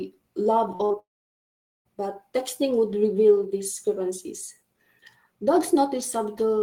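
At 0.75 s, short concealed packet loss begins. About 40 ms of audio arrived too late for the decoder. The receiver bridged the gap by extending the preceding sound and then blending back in. Two more losses follow straight after, at 0.85 s and at 0.92 s, the last about 20 ms. Each is heard as a brief smear or wobble in the speech. Together they make this stretch sound unsteady.

At 0.99 s the audio drops out until 1.87 s. This sounds like a long network dropout, likely caused by a stall in delivery. Nearly 0.9 s of speech never plays. The last sound carries on briefly as a fading buzz or hiss. Then there is near-silence for about 0.8 s. Speech resumes at 1.87 s, with the missing part gone rather than delayed.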